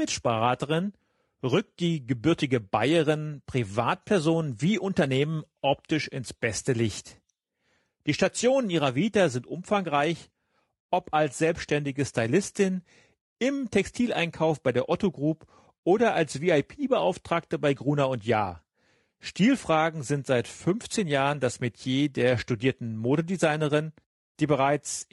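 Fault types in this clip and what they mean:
Low-delay AAC compression: The speech carries plainly audible coding damage across the whole clip, most likely from AAC-ELD, the low-delay AAC variant used in video calls. Its very short frames cannot separate closely spaced pitch harmonics well and spend bits inefficiently, so the voice comes out rough and grainy, with noise filling the gaps between harmonics. The degree of damage fits a low bitrate of around 32 kbps.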